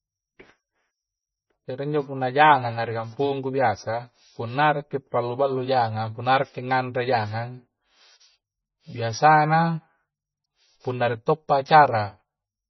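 Speech with heavy MP3 compression all the way through, likely a very low bitrate around 20 kbps: treble stops dead near 5.9 kHz, with watery, swirly artefacts.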